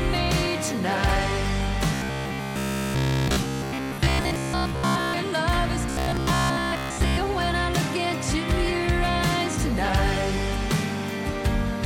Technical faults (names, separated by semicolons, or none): robotic sound from repeated short buffers